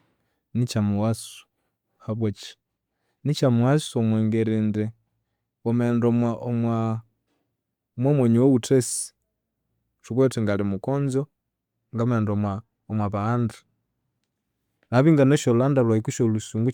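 A recording of speech, with nothing technically wrong anywhere in it. No fault turns up at any point, so there are no times or causes to report.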